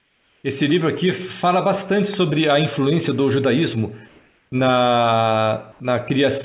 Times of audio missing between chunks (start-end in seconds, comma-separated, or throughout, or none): none